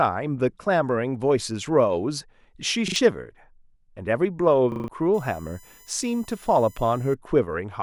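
At 2.88 s and again at 4.72 s, new audio failed to reach the output in time, so the device replayed its last chunk. This repeated buffer gives a stuttering run of identical pieces with hard joins, twice extra up to 2.96 s and four times extra up to 4.88 s. The spacing fits a 40 ms buffer, and a little speech is skipped each time.

From 5.14 to 7.14 s, current drawn by the USB bus in 1 ms frames leaks into the audio through power or ground. The result is USB whine, a steady 1 kHz-based tone whose strongest component sits at 7 kHz, about 30 dB below the speech.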